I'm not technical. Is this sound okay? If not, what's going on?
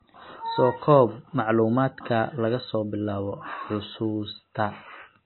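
No. Throughout, the speech sounds dull and muffled, with nothing above about 4 kHz, and has a watery, swirly quality where quieter detail flickers in and out. This is likely heavy MP3 compression, which discarded the treble and faint detail to save space.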